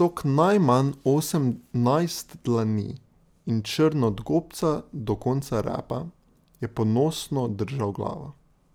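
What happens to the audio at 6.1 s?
Nothing goes wrong at 6.1 s; the speech continues through that moment without any audible dropout, click, distortion or other fault.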